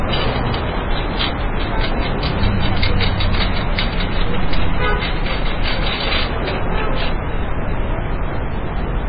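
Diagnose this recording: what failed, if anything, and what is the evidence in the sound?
MP3 compression, heavy and present throughout. Nothing survives above 5 kHz, so the top of the band stops at a hard ceiling, and the remaining audio has a watery, swirling texture with smeared attacks. That points to the codec stage, likely a very low-rate MP3 encode, in the region of 16 kbps. Starved of bits, the encoder cut the treble at a fixed frequency and discarded weak spectral lines, which drop in and out from frame to frame and produce the swirl.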